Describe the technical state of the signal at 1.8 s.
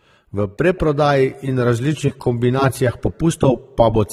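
At 1.8 s you're hearing AAC compression, present throughout: coarse spectral quantisation smears the speech, nothing survives above 16.1 kHz, and the texture suggests likely low-bitrate AAC-LC, around 32 kbps.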